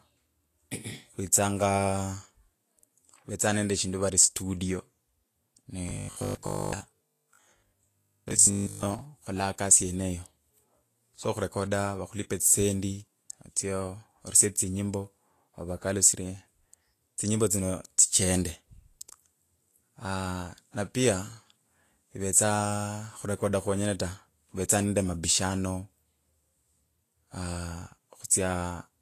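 From start to finish the speech has a hissy, grainy treble, sibilants break into noisy fizz and consonant attacks sound smeared, and nothing is present above 14.2 kHz. This is likely Vorbis compression at a low setting, with damage that fits a bitrate around 34 kbps. The encoder keeps only a smooth spectral floor up high and quantises the residue so coarsely that fine detail turns into noise of similar energy, while the low cut-off removes the highest frequencies.

Between 5.89 and 9.01 s the speech turns into a rigid, metallic buzz at 50 Hz that still roughly tracks the syllables. This is robotic sound from repeated short buffers, likely caused by audio arriving too late for playback. The software fills most of that stretch by looping a fragment of about 20 ms while the real audio is skipped, and that fixed loop rate imposes its own pitch.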